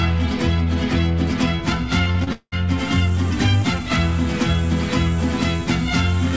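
From 2.04 to 2.54 s the sound turns choppy and robotic, with pieces dropping out: repeated packet loss. Four gaps, the longest 192 ms, were patched by stretching the last sound, so about half that half-second is filler, heard through a call path with nothing above 8 kHz.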